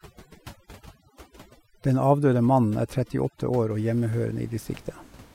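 From the start to about 3.70 s the gaps between phrases drop to near silence dotted with twinkling specks. This is overdone noise removal: a noise reduction stage set far too hard pulls individual frequency bands down or out whenever they sit close to its noise estimate, so the quieter parts of the speech are stripped away along with the room noise, which remains about 25 dB below the speech after this point.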